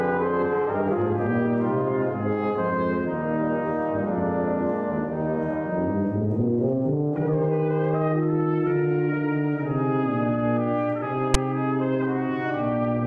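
At 11.34 s, a block of text tags was read by the decoder as if it were audio samples, so file tags played as audio. The character bytes become sample values clustered well away from zero, giving a sound shifted hard to one side of the waveform. The result is a brief, loud rasp of static, lasting only about 9 ms, that switches on and off with hard edges rather than fading.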